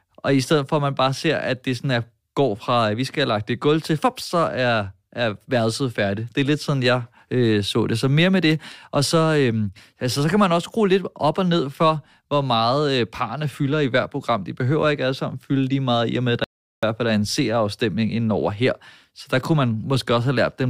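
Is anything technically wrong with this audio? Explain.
Yes. There is one audio dropout to silence, from 16.44 s to 16.83 s. The speech cuts off mid-flow and returns after about 0.39 s of silence with no room tone. The likely cause is a brief loss of input while recording continued writing silence, so that stretch is gone.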